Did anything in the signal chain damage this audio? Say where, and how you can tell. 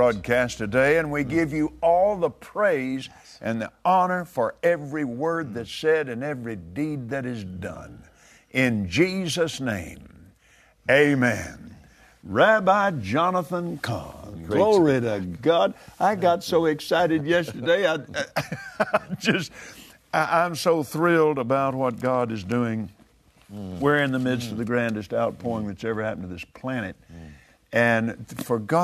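No, nothing audible in this recording points to damage at any stage of the signal chain.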